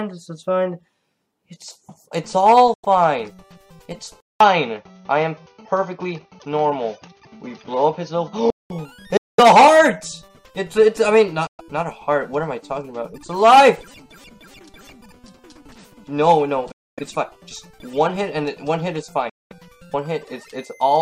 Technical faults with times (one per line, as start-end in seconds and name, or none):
2.74-2.85 Bluetooth dropout
4.20-8.70 input switched to a poorer device
9.17-9.40 Bluetooth dropout
11.47-11.61 Bluetooth dropout
16.72-16.99 Bluetooth dropout
19.29-19.53 Bluetooth dropout